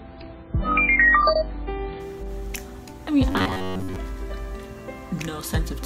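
From 0 to 2.0 s, the adaptive stream starts at a low bitrate. Nothing sounds above 5 kHz, which fits a roughly 16 kbit/s MP3, until quality jumps abruptly, with no gap, unlike a rebuffer stall.

From 3.32 to 3.96 s the sound becomes a rigid, metallic buzz near 93.8 Hz, likely robotic sound from repeated short buffers of about 11 ms covering most of the stretch. Its fixed pitch, confined to this burst, distinguishes it from steady mains hum.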